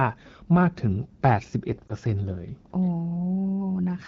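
A radio error corrupts a speech frame, so the AMR decoder fills in with its last good pitch and vocal tract settings at reduced gain. Between 1.88 and 1.92 s this lost AMR speech frame gives a brief dip or warble, which fits one missing 20 ms frame, against the light texture of the AMR-WB coding.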